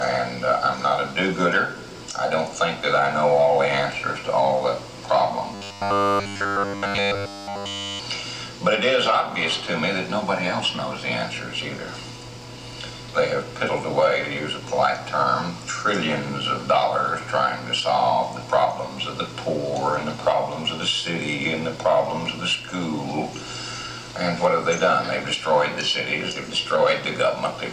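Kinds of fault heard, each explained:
Robotic sound from repeated short buffers: from 5.55 to 8.00 s the sound turns into a rigid, metallic buzz fixed at 100 Hz, made entirely of repeats. The likely cause is a 10 ms stretch being looped while new audio arrived too seldom.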